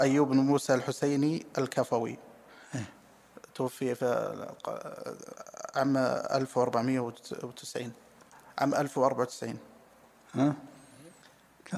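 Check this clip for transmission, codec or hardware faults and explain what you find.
No transmission, codec or hardware fault can be heard anywhere in the clip.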